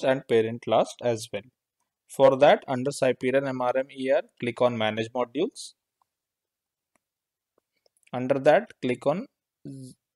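No technical faults can be heard anywhere in the audio.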